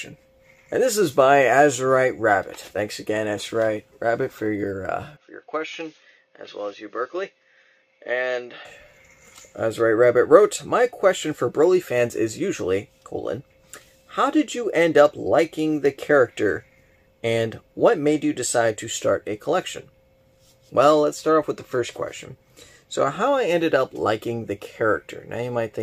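From 5.17 to 8.65 s the audio turns dull, with nothing above 6.6 kHz, drops about 5 dB in level and picks up a faint new noise floor, with no gap at either transition. This is likely an input switched to a poorer device, whose narrower band and different gain hold until the original input returns.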